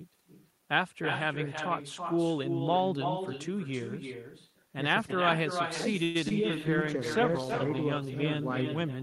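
A speech recording carried over a call, with every phrase trailed by its own ghost: throughout the clip a second, thinner copy of the talker follows the original by roughly 300 ms, only about 6 dB quieter. That is echo with no canceller. The far end is playing the call through a loudspeaker, its microphone picks the sound back up, and with nothing subtracting it, the talker's own audio returns after the network round trip. At 6.03 s the sound stalls for about 114 ms, the last sound stretched into a fading buzz rather than dropping to silence, and then speech carries on exactly where it left off with nothing skipped. This call audio freeze is likely the jitter buffer running dry while packets were held up in transit. The receiver kept extending the final sound until data arrived, so the stream is now shifted later by that much without any speech lost. Shortly after, around 6.29 s, there is a brief smear lasting a few hundredths of a second. 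This is short concealed packet loss: about 40 ms of audio never reached the decoder in time. The receiver patched only about 16 ms by continuing the preceding sound and then blended back in, which also pulls the timing slightly earlier again and can clip a short consonant. From 6.57 s to 8.77 s the speech turns coarse, watery and dull. That is a call bitrate drop, from 32 kbps down to 15 kbps, bottoming out for about 1.1 s. The bandwidth estimate fell, so the encoder had far fewer bits to spend, quantising more roughly and trimming the upper frequencies until the rate recovered.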